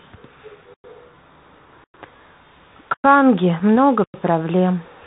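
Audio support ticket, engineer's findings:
Bluetooth CVSD headset codec across whole clip: narrowband one-bit delta link, consistent with 64 kbit/s CVSD. Speech capped near 4 kHz, scratchy sibilants, slope-overload distortion on loud highs, granular hiss underneath.

Gap between chunks at 0.74, 1.84, 2.94 and 4.04 s: delivery in 1 s chunks. 100 ms silences at a regular interval, nothing lost.

Unconcealed Bluetooth headset packet loss at 3.60 s: what sounds like a single dropped headset packet, not concealed. Roughly 4 ms abrupt hole, speech briefly quieter on return.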